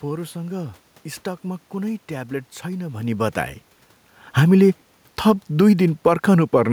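From 4.33 s to 6.68 s, the automatic gain control judged the input too loud or its background noise too strong and gradually turned its gain down, by about 4 dB. The speech sinks steadily, and the room noise sinks with it, unlike the level change near 3 s when the talker moved.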